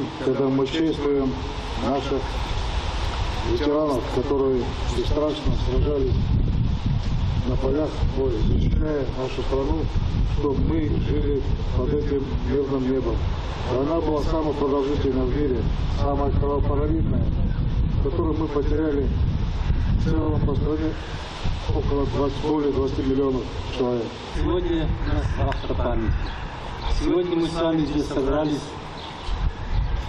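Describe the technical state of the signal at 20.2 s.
Repeated frames from 20.21 to 20.26 s: one 23.2 ms compressed block plays twice more, adding 46.4 ms. This is heard as a brief stutter and shows as identical adjacent slices on the spectrogram.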